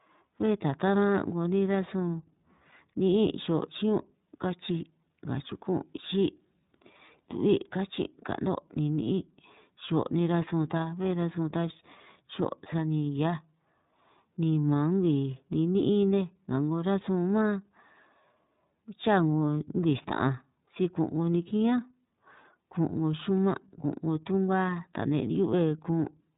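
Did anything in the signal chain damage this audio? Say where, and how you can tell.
Yes. The damage is in the codec stage: iLBC encoding runs through the entire speech clip, with nothing above 3.8 kHz, a narrowband roughness and a synthetic edge that fit 30 ms frames at about 13.33 kbps, each frame's excitation coded independently of the last.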